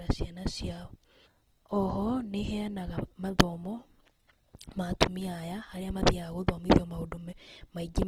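Opus compression, throughout: the speech turns plainly rough and grainy, likely from music-mode Opus near 16 kbps refilling starved bands with folded or noise-like energy.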